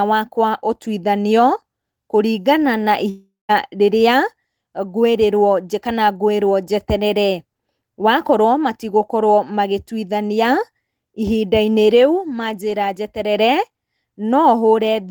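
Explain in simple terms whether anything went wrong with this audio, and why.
At about 3.09 seconds the speech breaks off, and the last sound keeps going as a fading buzzy hiss before giving way to near-silence. The speech returns at about 3.51 seconds, with roughly 0.4 seconds of it lost for good. This is likely a long network dropout, where no audio arrived for a while. A brief packet glitch would be patched over almost seamlessly, but here the stand-in sound dies away and leaves a silent gap of about 0.17 seconds.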